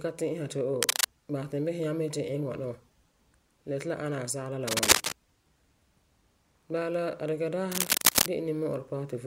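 Cable scratch noise appears three times in the speech: from 0.82 to 1.06 s, from 4.68 to 5.14 s, and from 7.72 to 8.28 s, each burst lasting longer than the one before. The sound is a dense, ragged crackle and rustle sitting about 5 dB above the speech level. The likely cause is a worn cable, connector or control being handled, so that its contact resistance fluctuates rapidly and injects irregular noise into the signal.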